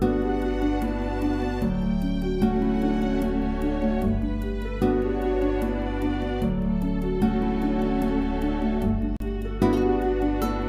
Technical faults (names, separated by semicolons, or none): Bluetooth dropout